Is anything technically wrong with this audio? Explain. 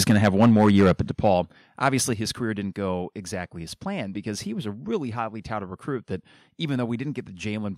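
Yes. Microphone overload from 0.09 to 1.01 s and from 1.85 to 1.89 s: the loudest peaks, running up to about 8 dB over the converter's limit, are flattened, likely from excessive input gain, adding a harsh crackle rather than a level change. Microphone volume stepped down at 0.11, 1.11 and 2.13 s, by about 2, 6 and 5 dB: voice and background drop together in a clean step, likely call software lowering the input after clipping.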